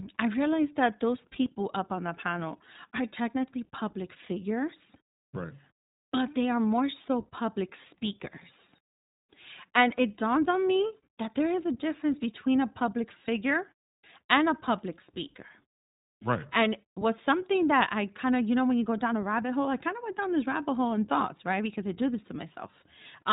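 From start to finish the speech has passed through the iLBC codec, a narrowband VoIP coder that rebuilds each short block of excitation on its own rather than carrying detail over from the block before. The frame-by-frame texture fits 20 ms frames at roughly 15 kbps. Nothing above 3.8 kHz survives, so sibilants lose their edge and the whole clip sounds boxed in. The coding damage is plainly audible as a slightly rough, synthetic graininess throughout.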